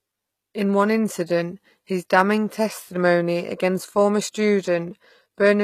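Throughout, s sounds are gritty and lispy, with nothing above 14.9 kHz. This is likely HE-AAC compression rebuilding the treble from copied lower bands at a low bitrate.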